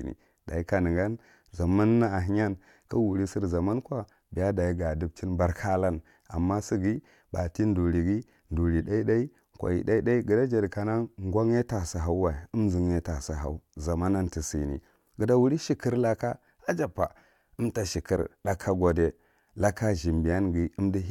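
Nothing stood out as a technical problem anywhere in the speech on listening.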